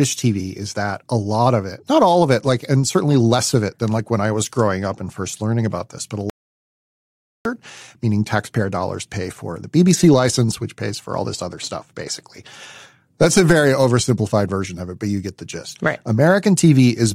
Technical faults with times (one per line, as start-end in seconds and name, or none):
6.30-7.45 audio dropout to silence